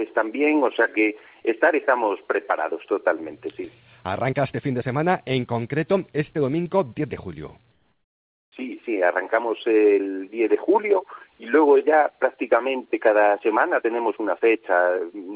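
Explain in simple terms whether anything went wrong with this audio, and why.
From 7.72 to 8.52 s the background becomes a smooth, quieter hiss, likely comfort noise in place of the background; a dropout would go silent instead.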